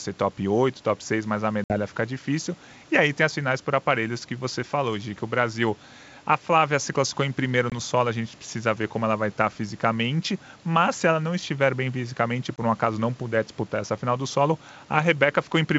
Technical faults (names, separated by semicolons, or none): packet loss on an ADPCM call